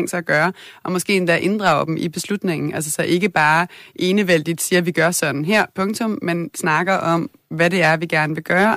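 Hard clipping breaks into the speech five times: 1.11–1.79 s (about 5 dB over), 3.14–3.60 s (about 3 dB), 4.20–4.35 s (about 4 dB), 5.53–5.61 s (about 5 dB) and 7.60–8.74 s (about 4 dB). Louder peaks exceeded what the signal path could carry and were cut flat, giving crackle on the peaks in those passages. The waveform shows squared-off tops, and the spectrogram shows broadband harmonic smearing up the spectrum.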